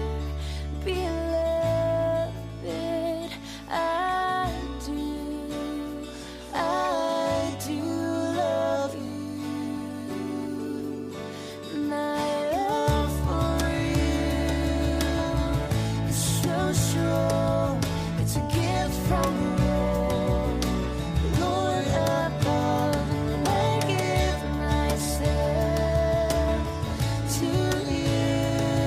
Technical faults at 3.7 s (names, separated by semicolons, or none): none